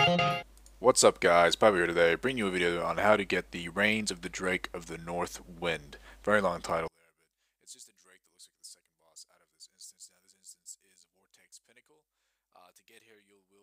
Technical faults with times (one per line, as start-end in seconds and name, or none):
6.88-13.63 one channel inverted